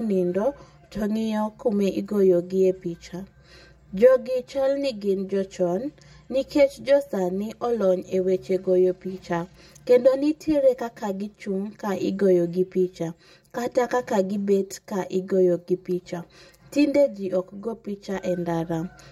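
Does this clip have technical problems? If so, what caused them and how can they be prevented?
Yes. Channel delay (comb filtering) runs through the whole speech clip. One channel lags the other by roughly 5 ms, and summing them to mono cancels shared content at evenly spaced frequencies from around 100 Hz upward, leaving the speech hollow. Unlike a flanger, these notches never sweep. Prevent it by time-aligning both channels before any mono fold-down.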